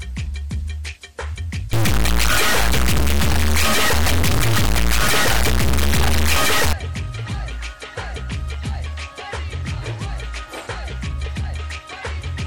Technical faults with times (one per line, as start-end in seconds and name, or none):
1.73-6.73 integer read as float